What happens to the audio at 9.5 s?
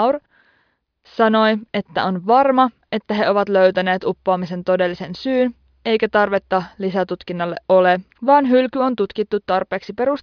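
Nothing goes wrong at 9.5 s; the speech carries on intact through that moment with no dropout, click, glitch or other audible fault.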